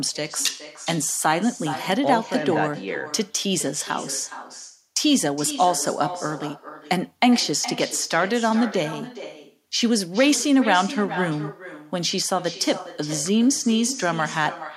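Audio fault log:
Throughout, echo with no canceller: every phrase of the speech returns roughly 0.4 s later as a quieter, thinner copy, about 14 dB below the talker. The far end's loudspeaker feeds its microphone. Nothing removes that pickup, so the voice comes back after the network round trip.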